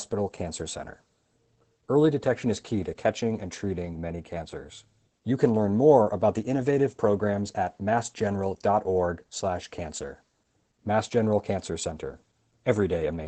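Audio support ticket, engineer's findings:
Opus voice compression throughout. Encoder running at low rate, sound consistent with SILK wideband near 12 kbps. Band cut off at 8.7 kHz, excitation coarsely coded. Speech plainly muffled, slightly hoarse and robotic, with no content above cut-off.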